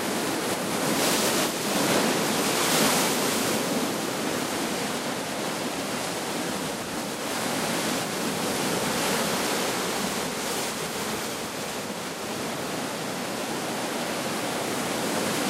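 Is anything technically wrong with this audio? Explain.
Yes. From 3.10 to 4.56 s, a train of clicks is likely from interference or a faulty connection or power supply: around fifteen unevenly spaced pops, about 8.3 per second, roughly 10 dB above the sound.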